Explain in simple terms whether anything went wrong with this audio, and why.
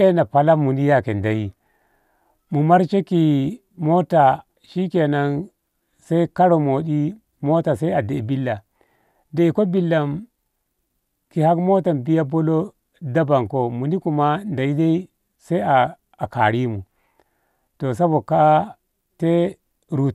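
Nothing went wrong with this audio, because no fault can be heard anywhere in it.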